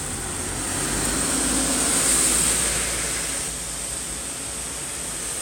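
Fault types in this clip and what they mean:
Doubled audio track: from 0.70 to 3.48 s a second full-band copy of the sound trails roughly 150 ms behind, about 5 dB quieter, with no decay or room colour, and it cuts in and out abruptly, likely a slower second capture path or misaligned edit.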